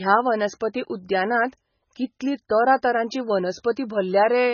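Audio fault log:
throughout: MP3 compression, likely the cause of the dull, watery sound. Nothing sounds above about 6.7 kHz, and weak detail swirls in and out. Heavy damage like this points to a very low bitrate, around 16 kbps. The encoder drops treble and faint frequency lines to save bits.
0.60 s: pre-echo. A brief hiss, about 10 ms long, comes just before a sharp attack, which sounds softened. The codec spreads noise across its whole block. Noise meant for the loud attack leaks into the quiet moment ahead of it.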